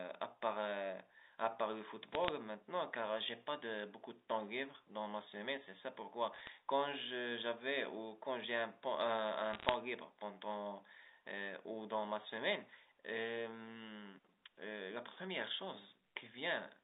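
Bit errors on a digital phone line corrupt this telephone speech three times, at 2.12–2.29 s, 6.34–6.48 s and 9.51–9.74 s. Flipped bits, around 0.4 to 0.5 percent, each change a single G.711 sample, so brief bursts of sharp ticking crackle sit on top of the narrowband 300–3700 Hz line sound.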